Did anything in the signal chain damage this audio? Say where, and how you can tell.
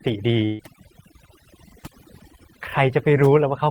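Yes. Overdone noise removal runs throughout, at the call-processing stage. A suppressor set too aggressively is zeroing individual frequency bins near its noise estimate, removing weak parts of the speech too. The result is a near-silent floor with twinkling artefacts. A spectrogram shows a black background scattered with isolated specks and holes in the fainter harmonics.

A burst of packet loss hits the network stage from 0.45 to 0.61 s. The receiver spends about 137 ms extending the last sound as a fading buzz or hiss, and about 140 ms of speech never arrives. A spectrogram shows frozen, smeared bands that dim, then an abrupt jump ahead.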